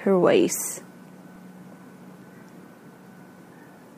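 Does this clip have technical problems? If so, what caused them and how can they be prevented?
Yes, CD scratch ticks: about five regular ticks a second from 0.71 to 2.64 s, the longest about 3 ms, where a disc scratch defeated error correction once per rotation. They show as evenly spaced thin vertical lines on a spectrogram and brief dips in the waveform. Clean or resurface the disc, or rip it with a secure, re-reading ripper.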